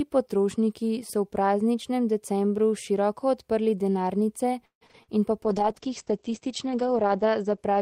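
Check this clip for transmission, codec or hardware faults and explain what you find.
Two transmission faults are audible, one straight after the other near the end of the speech.

Repeated packet loss (robotic sound), 4.65 to 5.17 s: audio arrives with four holes in about half a second. The decoder covers each one by stretching the preceding sound, so about 55% of this span is synthetic fill. The longest hole is 157 ms, and some sound is lost outright. The result is a choppy, robotic stutter with pieces of the speech missing.

Call bitrate drop, 5.44 s to the end: the connection's bandwidth estimate falls, and the encoder switches to much coarser coding. The change fits a cut from about 32 kbps to roughly 9 kbps, with the lowest quality lasting about 1.65 s. At that rate the codec also narrows the audio band from 20 kHz to 8 kHz. The speech turns muffled and rough, with a watery texture.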